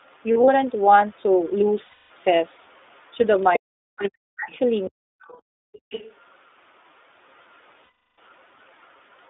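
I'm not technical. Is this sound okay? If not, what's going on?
No. The speech has passed through the iLBC codec, a phone-call coder that keeps only roughly 300 Hz to 3.6 kHz, so it sounds muffled, slightly rough and synthetic throughout.

There are three spots of lost iLBC frames, at 0.32 to 0.50 s (a few short scattered gaps), 1.86 to 2.12 s and 7.84 to 8.18 s. The missing bits are filled with a held, buzzy vowel-like sound, and clear speech returns immediately afterwards rather than slowly recovering.

You can also hear the other side's voice leaking through, a quieter second voice at 3.38 to 4.59 s, 5.21 to 6.15 s and, very faintly, 8.30 to 8.87 s. It is likely a loudspeaker echo the call's echo canceller failed to remove.

From 3.58 to 5.20 s there is speech suppressed in double talk. Likely because both people talk at once, the main voice repeatedly dips sharply or cuts out in pieces, and it is the voice itself that drops, not just the room.

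From 5.48 to 5.90 s there is background gated by the echo canceller. The room sound briefly vanishes into near silence while the other side plays, then comes back.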